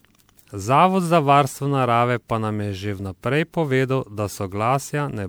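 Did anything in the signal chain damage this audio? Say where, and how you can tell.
Yes, at the codec stage. Throughout the speech the sound is swirly, smeared and hollow, and consonant attacks blur. That is more damage than a single encode at what sounds like 128 kbit/s MP3 would cause. This generation loss is likely from about seven re-encodes, each quantising on a shifted frame grid.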